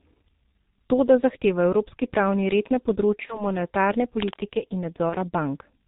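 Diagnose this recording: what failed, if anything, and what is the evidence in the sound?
The whole clip went through the G.723.1 codec at the encoding stage. The speech has no energy above 4 kHz, so it sounds muffled. Consonants smear and vowels take on a hoarse, rough quality from start to finish. This heavy coding damage fits a rate near 6.3 kbit/s. At that rate, 30 ms frames and a slowly updated vocal model can't follow fast changes in the voice.

In the network and decoder stage there was VoIP packet loss concealed by the speech codec, at 3.26 to 3.47 s and again at 5.10 to 5.15 s. Each gap matches a single lost 30 ms packet. The decoder filled each gap by carrying forward its last pitch and filter settings at falling gain. This produces a brief stretched, fading sound. At 3.26 s the weakened, distorted sound lingers well past the missing 30 ms while the decoder state recovers.

From 4.20 to 4.44 s a burst of dense, ragged scratching sits over the speech, only a little quieter than the voice itself. 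This is cable scratch noise, most likely caused in the analogue wiring by a worn cable or connector shifting. Its contact resistance would flicker rapidly, injecting irregular noise into the signal.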